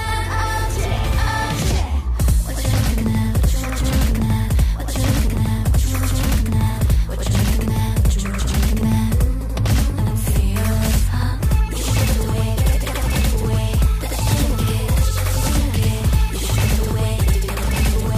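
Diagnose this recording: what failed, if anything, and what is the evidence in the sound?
Every attack in the recording is followed by a second copy of itself about 85 ms later, at the same level as the first. Transients come out doubled, like a tight slap echo, and the smear runs from start to finish. This is a channel delay (doubling) fault at the driver or buffer stage. One channel arrived a full buffer late, which fits a 4096-sample buffer at 48 kHz, and summing the two channels to mono laid the late copy audibly behind the original.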